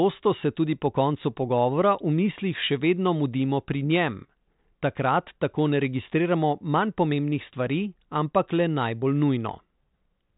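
No technical faults are audible in this speech.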